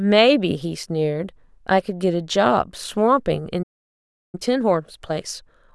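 The clip is speech that cuts to silence at 3.62 s and stays silent for about 0.71 s, resuming at 4.35 s. This is a playback stall, likely caused by the player running out of buffered data or its output thread being blocked. From 4.35 s to the end, the speech runs about 1.1 times faster at unchanged pitch. That is time-compressed catch-up, in which the player drops short segments and cross-fades across the gaps to work off the backlog built up during the stall.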